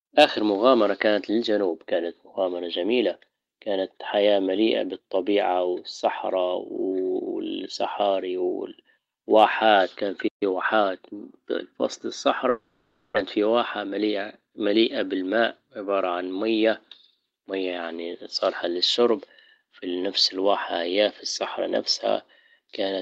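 A speech clip with three problems clustered in the middle. Right after "واحات كان", at 10.27 s, there is a playback stall: the speech stops dead in mid-flow for about 0.13 s before resuming at 10.43 s, most likely because the player ran out of buffered data or its output thread was briefly blocked. On a waveform this is a flat, near-zero gap cutting cleanly through the speech envelope, and on a spectrogram it is a vertical blank band across all frequencies with sharp edges on both sides. From 10.43 s to 11.77 s comes a time-compressed catch-up, as the player works off the backlog the stall created. Small slices are dropped and cross-faded, so the speech runs about 1.1 times faster at unchanged pitch. The spectrogram shows the harmonic bands at their normal spacing but with syllables packed closer together, and occasional smeared seams where pieces were joined. From 12.49 s to 13.18 s there is a long network dropout, likely lost packets, with about 0.6 s of audio never arriving. 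The receiver fills the gap for roughly 0.67 s by stretching the last sound into a buzzy, fading continuation rather than leaving silence. Speech then resumes further along, with the missing stretch gone and a small shift in timing. On a spectrogram the fill appears as repetitive, blurred horizontal streaks that decay into the noise floor. The waveform shows a decaying, oddly regular tail instead of normal syllable shapes.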